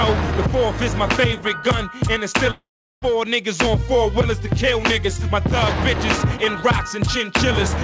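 From the first moment to the end, the level breathes, with a swing of around 5 dB, so loud and soft passages sit squashed together. This is gain pumping, likely from the input gain being set far too high for the microphone, with a fast limiter or compressor pulling the level down on each peak and letting it recover in between.

At 2.51 s the audio breaks off. The last sound carries on as a fading buzzy smear, then gives way to near-silence, and the audio resumes at 3.05 s with about half a second of the original never heard. This is a long network dropout, likely caused by packets failing to arrive. The receiver filled the hole by stretching out what it last had, and after that synthetic tail ran out it could only play silence. Throughout the clip nothing is heard above 8 kHz, which fits a G.722 call codec and is not a fault here.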